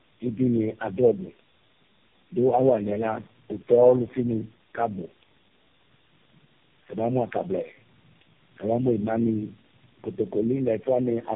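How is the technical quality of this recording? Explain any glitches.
The technical quality is poor, degraded by one fault across the whole speech clip. Tandem speech coding runs throughout: the audio passed through four low-rate speech codecs in a row, the last sounding like AMR-NB, each re-encoding the previous one's damage. The speech is rough, muffled and warbly. A spectrogram shows nothing above 3.5 kHz and smeared, blotchy harmonics.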